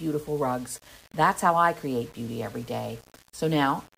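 Across the whole speech clip a grainy, signal-following distortion sits roughly 25 dB below the level. The likely cause is low bit depth without dither: rounding to about 7 bits, so quiet passages turn gritty and the softest tails sputter or drop out.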